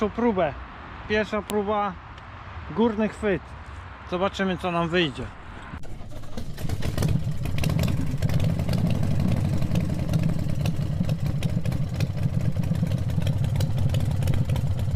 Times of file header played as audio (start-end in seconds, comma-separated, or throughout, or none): 1.50